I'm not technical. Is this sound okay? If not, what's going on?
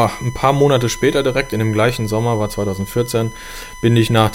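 No. A steady high whistle at 1 kHz runs under the speech for the whole clip. This is USB whine. A USB connection pulls power in bursts every millisecond, and that rhythm leaks into the audio through shared power or ground wiring.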